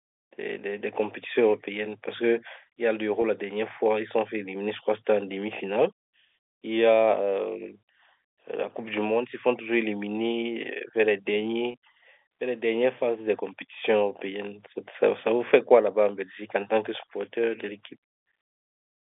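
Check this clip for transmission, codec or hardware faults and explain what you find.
Two brief packet losses with pitch repetition, at 3.22 to 3.24 s and 11.72 to 11.74 s, each about 20 ms, consistent with a single dropped packet. The receiver fills each gap by repeating the last pitch period, so the speech holds a slightly buzzy, sustained tone rather than dropping to silence or clicking. The G.711 telephone band, roughly 300 Hz to 3.6 kHz, is heard throughout and is working normally.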